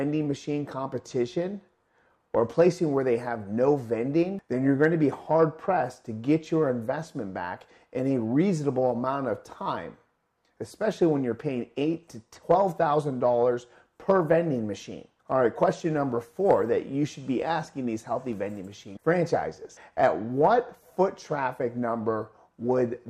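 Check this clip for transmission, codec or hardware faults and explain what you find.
One fault: crude rate conversion from 0.70 to 2.20 s. Samples were linearly interpolated without filtering, in a pattern that fits a 44.1 kHz to 48 kHz change, producing inharmonic error roughly 45 dB below the signal. It sounds like faint gritty fizz tracking loud, bright passages. A spectrogram shows stray non-harmonic lines and mirrored images.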